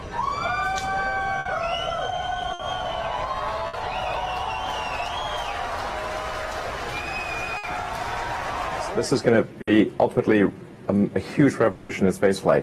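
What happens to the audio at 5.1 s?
Nothing goes wrong at 5.1 s; the audio plays through that moment intact, with no dropout, click or distortion.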